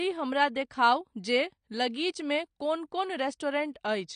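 A short speech recording carries plainly audible AAC compression throughout. Nothing is present above about 9.7 kHz, so the top octave is missing and the sound is dull, with a smeared, fizzy texture on sibilants. The cause is likely low-bitrate AAC-LC coding. The sharp band limit and the spectral smearing fit a rate around 32 kbps, where the encoder quantises frequency lines coarsely and discards high bands to save bits.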